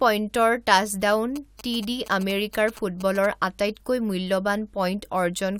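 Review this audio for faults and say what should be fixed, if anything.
GSM signalling bursts from 1.36 to 3.26 s: a nearby 2G phone handling network signalling sent short groups of radio bursts, which the audio circuitry rectified. The speech picks up a galloping pattern of ticks and brief 217 Hz buzzes, about 15 dB below the speech. Keep phones away from the microphone, cables and interface during recording, and use shielded, well-grounded balanced cabling.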